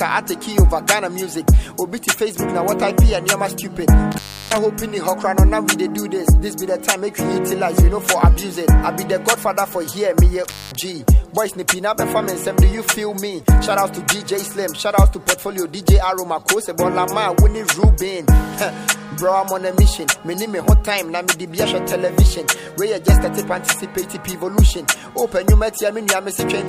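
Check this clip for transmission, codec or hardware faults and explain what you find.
There's an intermittent contact fault, twice, at 4.12–4.58 s (open about 331 ms) and 10.45–10.75 s (open about 222 ms). A loose plug or cable briefly breaks, so the audio drops to faint hiss, with crackle either side.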